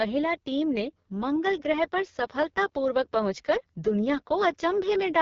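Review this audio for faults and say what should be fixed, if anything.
AMR wideband (HD Voice) codec damage runs throughout: speech sounds rough and raspy, with nothing above 7.3 kHz, which fits the lowest 6.6 kbit/s mode starving the pulse-driven speech model. Configure the link to negotiate 12.65 kbit/s or higher.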